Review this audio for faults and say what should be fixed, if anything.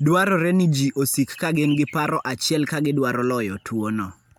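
Nothing needs to be fixed, as there are no faults in this audio.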